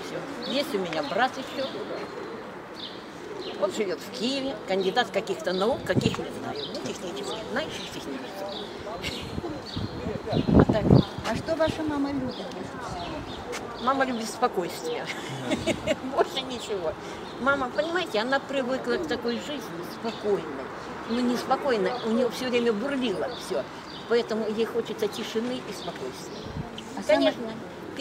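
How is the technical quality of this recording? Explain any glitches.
Nothing here sounds like a glitch; the recording holds together without any dropouts, clicks or stutters to point to.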